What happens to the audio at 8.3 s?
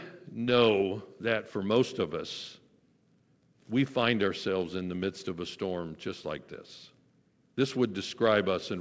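Nothing goes wrong at 8.3 s: the speech there passes through the call path intact, with no dropout, glitch or other fault at that moment.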